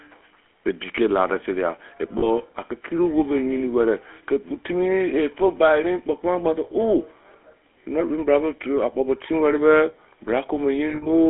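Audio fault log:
Throughout: GSM full-rate codec. The speech has the plainly audible buzzy, gravelly roughness of the first GSM coder at 13 kbps. It rebuilds the voice from a vocal-tract filter excited by a sparse, regular pulse train, so fine detail turns coarse. On a spectrogram the energy sits within roughly 250 Hz to 3.4 kHz, with nothing above 4 kHz. The upper formant bands look smeared and blocky, and harmonics appear as grainy, uneven striations.
2.18–2.27 s, 10.9–11.08 s: lost GSM frames. At 2.18 s a 40 ms gap, which fits two lost frames, is filled by repeating the last good frame, giving a brief metallic ring. Near the end, 120 ms of loss is scattered over 160 ms, with the longest run about 70 ms. There the sound rings hollowly. The waveform shows a short repeated pattern, and the spectrogram shows frozen horizontal bands.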